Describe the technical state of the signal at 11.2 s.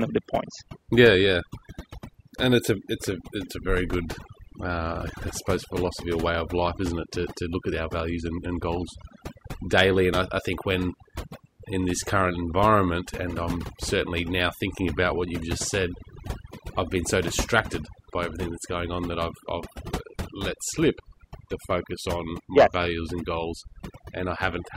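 At 11.2 s you're hearing overdone noise removal, and it runs the whole clip. The denoiser was pushed too hard, clamping any band sitting near its noise estimate, quiet speech detail included. So the background drops and breaks up into twinkly specks.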